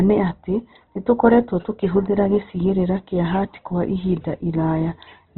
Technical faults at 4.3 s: Opus compression

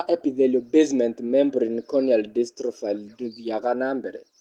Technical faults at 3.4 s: none

